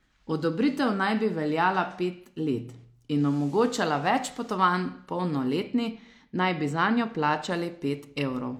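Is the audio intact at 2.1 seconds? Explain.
Yes, the audio is intact at 2.1 seconds, with the speech running through that moment without any audible fault.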